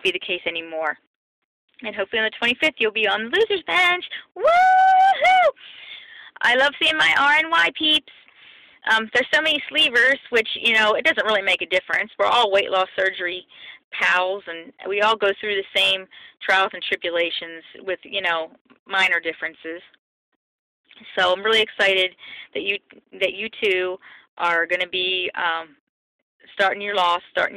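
No technical faults are audible.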